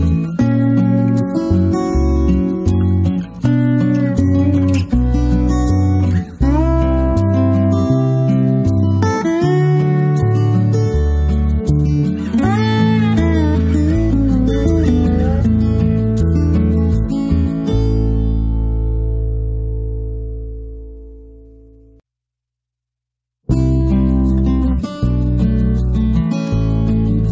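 No dropouts, clicks, distortion or timing faults register anywhere in the audio.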